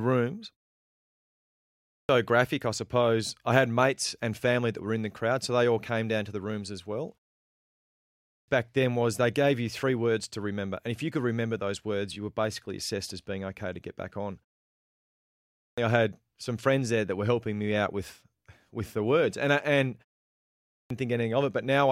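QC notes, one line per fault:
1.49 s, 7.84 s, 15.24 s and 20.32 s, clipped start after a pause: after silences of 0.36 to 1.0 s, the output wakes late and swallows about 0.54 to 0.64 s of speech, so each phrase begins abruptly. The waveform jumps from flat straight into speech with no onset, and the spectrogram shows a hard vertical edge.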